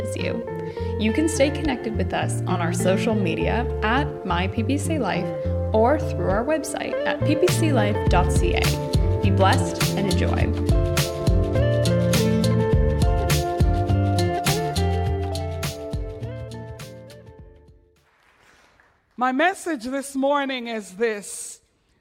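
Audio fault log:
Nothing to log here; there's nothing wrong to flag anywhere in the audio.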